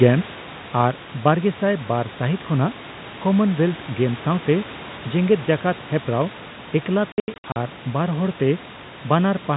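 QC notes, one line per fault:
0.05–1.14 s, automatic gain falling: the gain control pulls the opening down by about 6 dB, so the speech and background sink together.
7.12–7.56 s, packet loss filled with silence: about 260 ms of gaps spread over 440 ms, with runs up to 80 ms, fitting 20 ms packets, with hard edges before "ᱟᱨ ᱵᱟᱨᱦᱚᱲᱛᱮ".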